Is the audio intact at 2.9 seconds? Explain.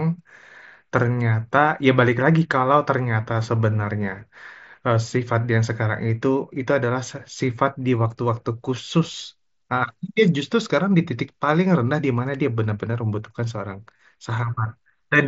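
Yes, the speech is intact at 2.9 seconds, with no fault at that moment beyond the light graininess of the mSBC Bluetooth headset link it passes through.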